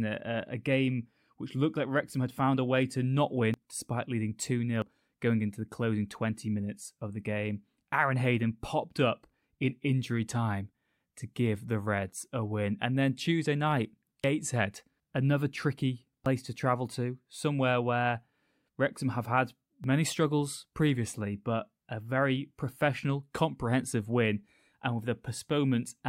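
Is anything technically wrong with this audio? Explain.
Yes. The speech skips forward abruptly five times, at 3.54 s (between "a way to not" and "despite leading"), 4.82 s (just before "going into the closing"), 14.24 s, 16.26 s (between "another tricky" and "to travel to somewhere") and 19.84 s. Each is a jump with no gap, most likely a dropped buffer (overrun). Roughly 70 ms goes missing at the first, second and fourth, less at the others. The waveform shows a sharp step splice, the spectrogram a thin vertical broadband line.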